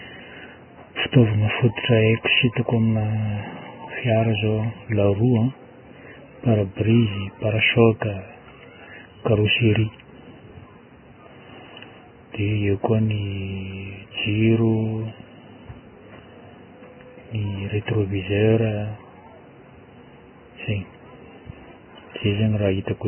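Throughout, the speech sounds hissy and grainy with nothing above 3 kHz, likely heavy Vorbis compression, consistent with a bitrate near 10 kbps.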